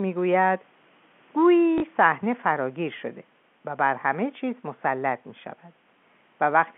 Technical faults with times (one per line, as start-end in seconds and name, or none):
1.78-1.82 packet loss with last packet repeated